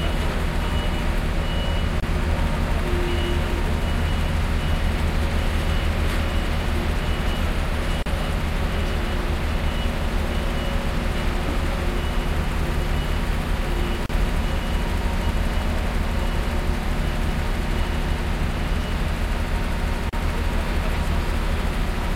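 The audio was encoded as separate pieces about 6 s long and joined without trimming each run's start delay and end padding, leaving a gap at each join of encoded pieces. Silence opens in the continuous sound at 2.00 s for 25 ms, then at 8.03 s, 14.06 s and 20.09 s for 34 ms each. Each dropout has smeared edges, and the sound resumes exactly where it broke off.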